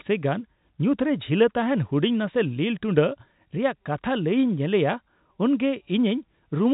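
A speech clip carried over G.711 telephone coding with nothing above 3.8 kHz, and nothing in it is technically wrong.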